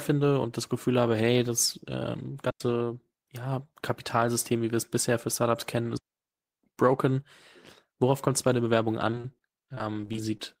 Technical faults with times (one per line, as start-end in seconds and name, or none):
2.50-2.60 digital wireless dropout
5.97-6.63 digital wireless dropout
9.11-10.40 repeated packet loss (robotic sound)